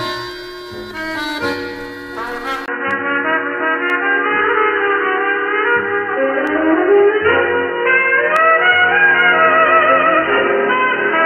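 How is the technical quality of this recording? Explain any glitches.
The recording has two kinds of glitch. Sharp clicks recur throughout, and partway through the sound turns dull and narrow and stays that way.

Dropped samples: single clicks at 0.97, 2.91, 3.90, 6.47 and 8.36 s. A tiny fraction of a millisecond likely goes missing, so the waveform jumps abruptly.

Input switched to a poorer device: at 2.66 s there is a 20 ms gap. From then to the end, the band is narrower, the level shifts modestly, and a faint new noise floor appears. This is likely a switch to a narrower-band microphone.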